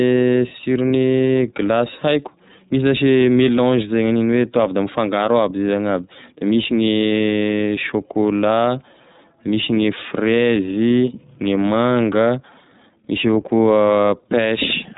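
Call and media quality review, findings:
Throughout: speech muffled, nothing above 3.8 kHz; rough, slightly synthetic texture, plainly audible. iLBC codec, narrowband VoIP. Excitation coded per 30 ms frame without drawing on the previous frame; fits the 13.33 kbps mode.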